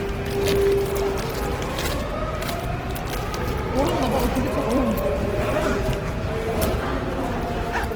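A recording of sounds, with Opus compression damage plainly audible from start to finish. Tonal parts come out noisy, rough and grainy rather than clean. There are few hollow gaps or swirling, though. The audio still reaches up to about 20.4 kHz, so the bandwidth has not narrowed. That points to the music mode, with a rate as low as 16 kbps. The likely cause is the encoder running out of bits, filling bands with folded copies of lower bands or with noise.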